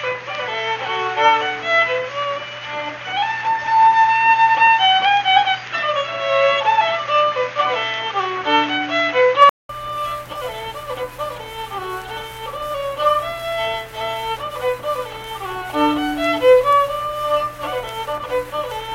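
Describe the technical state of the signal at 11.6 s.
At 11.6 s the signal is intact, with no fault audible at that moment.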